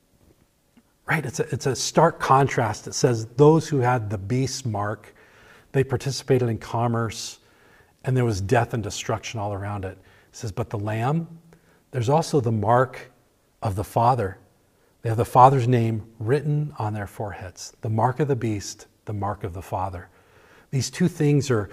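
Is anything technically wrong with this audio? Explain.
No, no technical faults are audible.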